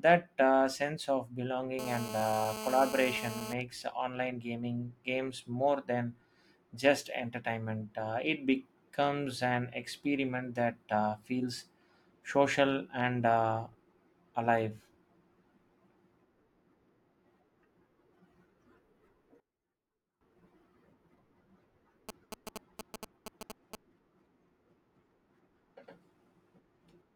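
GSM phone buzz runs from 1.79 to 3.54 s: a nearby 2G phone in a call transmits bursts about 217 times a second, and the audio circuitry rectifies those radio pulses into a hard, raspy 217 Hz buzz, rich in harmonics, sitting about 9 dB below the speech.

One channel inverted is the likely cause of the sudden hollowing between 19.40 and 20.21 s. The speech drops by about 19 dB and turns faint, as if only the difference between the channels remains once reversed polarity cancels everything common to both.

GSM signalling bursts appear from 22.09 to 23.75 s as a galloping dit-dit-dit of brief 217 Hz buzzes. A 2G phone emitting short groups of radio bursts is being rectified by the audio circuit, and the pattern sits roughly 10 dB under the speech.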